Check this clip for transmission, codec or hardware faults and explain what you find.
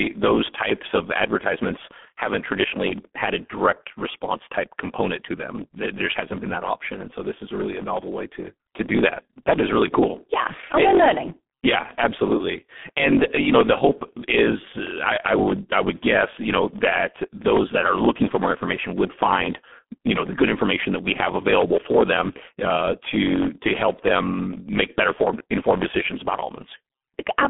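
Two faults run through the whole speech clip: a truncating block size mismatch and heavy G.723.1 codec damage.

From start to finish, one stage hands over longer blocks than the next stage reads, and the tail of each block is discarded. The regular jumps produce a buzz at about 45.9 Hz, which fits 1024-sample written blocks. The speech also runs about 1.07 times fast while keeping its timbre.

Also throughout, the audio has passed through the G.723.1 codec, a low-rate telephony coder, at what sounds like around 6 kbit/s. Nothing remains above 3.8 kHz within a 150 Hz to 3.5 kHz line band, and the slow-updating voice model leaves the speech muffled and hoarse, with smeared consonants.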